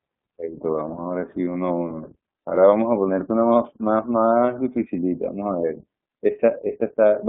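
iLBC codec damage runs throughout the speech: each 30 ms frame is coded independently within a 200 Hz to 3.5 kHz band, leaving it muffled, rough and synthetic, consistent with 13.33 kbps mode.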